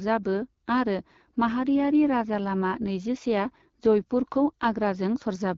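Throughout, the speech passes through an AMR wideband (HD Voice) codec at a low rate, which fits 8.85 kbit/s, leaving it plainly rough and raspy.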